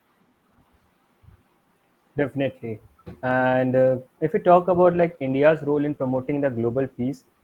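From 4.88 to 7.13 s, a call bitrate drop makes the speech rough and watery, consistent with falling from 32 to roughly 17 kbps. On a spectrogram, the upper-band detail thins and smears.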